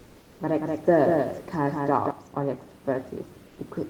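From 0 to 0.39 s, and again from 3.47 to 3.55 s, the room noise, which sits about 29 dB below the speech, gives way to comfort noise in place of the background. It is a flat, featureless hiss about 3 dB quieter, likely from discontinuous transmission filling the pauses. On a spectrogram these stretches appear as smooth, uniform bands without the fine texture around them.

From 0.59 to 2.11 s a doubled audio track runs under the speech. A dry, full-band copy a few dB quieter trails by roughly a fifth of a second and starts and stops abruptly, likely a second capture path or an edit holding two copies. The waveform shows each onset repeated at that fixed lag.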